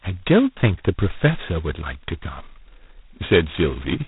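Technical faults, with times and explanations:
Throughout, G.726 ADPCM: prediction errors coded with so few bits leave a harsh hiss following the speech level, nothing above 3.9 kHz, which fits 16 kbit/s.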